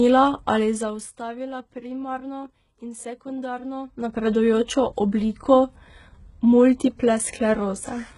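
From start to finish the speech carries heavy codec damage, most likely from HE-AAC compression at a very low rate, something like 12 kbps. The top end stops dead at about 11 kHz, and what sits just below that isn't the original treble but lower bands copied upward and shaped only roughly, so the harmonics don't line up. The s sounds come out gritty and metallic or lispy. There's no unwanted fader-style riding of the level.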